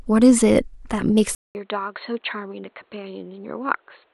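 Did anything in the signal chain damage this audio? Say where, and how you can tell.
Yes. The damage sits at the capture end, where the input device likely switched to a poorer microphone. At 1.35 s the speech cuts out for about 200 ms. It returns duller and boxier, with nothing above 4.3 kHz, and stays that way to the end. The level drops by roughly 10 dB. A new noise floor appears, around 40 dB below the speech. A narrower band, a different tone and fresh background noise all arriving together after a gap point to a different device taking over.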